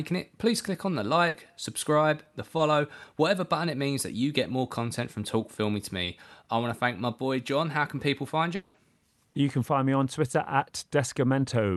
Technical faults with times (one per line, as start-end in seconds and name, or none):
1.28-1.35 burst of packet loss
2.57-2.59 short concealed packet loss
6.04-6.07 short concealed packet loss
8.55-8.75 long network dropout